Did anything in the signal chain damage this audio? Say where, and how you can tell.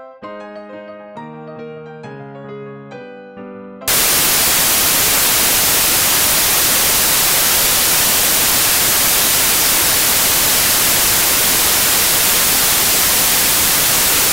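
Yes. At the sample-format conversion stage, samples are built from the wrong bytes from 3.88 s to the end at 14.32 s. The reader misassembles each sample, so the fast-changing low bits become the large part of each value. That turns the audio into loud, harsh broadband noise, close to white on loud passages.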